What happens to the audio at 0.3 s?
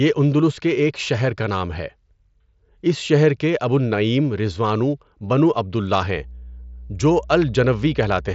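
At 0.3 s the speech comes through intact, with no fault at that moment, just the Bluetooth mSBC headset path carrying it with nothing above about 7.7 kHz.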